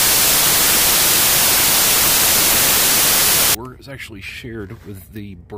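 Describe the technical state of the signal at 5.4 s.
At 5.4 s the signal is intact, with no dropout, distortion, glitch or other fault audible at that point.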